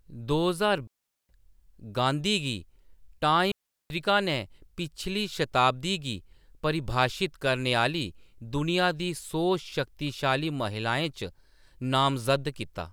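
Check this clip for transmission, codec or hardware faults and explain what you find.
There are two digital wireless dropouts in this speech clip, from 0.87 to 1.29 s and from 3.52 to 3.90 s, each about 0.4 s long. The receiver lost too much of the link's data and muted quickly, so you get clean near-silent holes with no noise burst either side.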